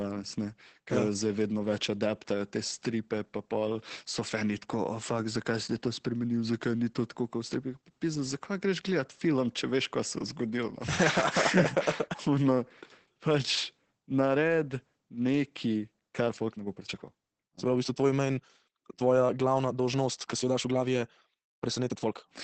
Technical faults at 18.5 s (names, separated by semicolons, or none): Opus voice compression; time-stretched section